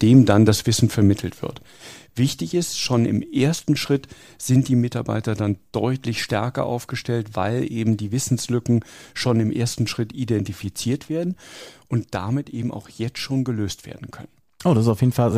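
No technical faults can be heard anywhere in this recording of speech; the signal stays steady and intact throughout.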